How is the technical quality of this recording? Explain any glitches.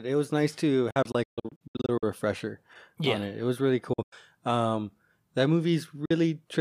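The speech is broken by gaps. Bluetooth dropouts occur at 0.91 to 2.03 s after "was nice to", with about 0.53 s of sound missing in scattered holes up to 0.14 s long; at 3.93 to 4.13 s after "was really"; and briefly at 6.05 s. Packets likely failed to reach the headphones in time, leaving abrupt silences before the speech resumes further on.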